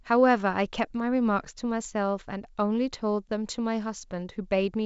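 No technical faults can be heard anywhere in the recording.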